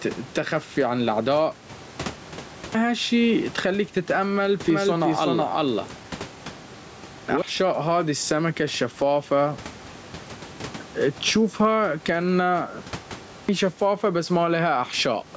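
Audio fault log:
throughout: gain pumping. The background swells in the gaps and ducks under each loud syllable, with a level swing of around 10 dB, and loud and soft passages sit squashed close together. This likely comes from gain set far too high into a fast limiter. Unlike a level drift, the swells follow every loud sound.
2.42 to 13.16 s: clipped start after a pause, at 2.42, 6.93, 10.45 and 13.16 s. After silences of 0.37 to 1.09 s, about 0.33 to 0.35 s of each onset is swallowed, as before "هالشي اتخليك تتأمل" and between "تشوفها كأنها" and "شفافة بس". A sleeping output device is waking up and relocking. Muted pauses return in time, but here the first sounds are lost.
4.7 to 7.42 s: doubled audio track, between "هالشي اتخليك تتأمل" and "هذي السمكة". A second full-band copy, about as loud as the original, trails roughly 400 ms behind and starts and stops abruptly, likely from a second, slower capture path. 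Unlike an echo, it has no decay or room colour.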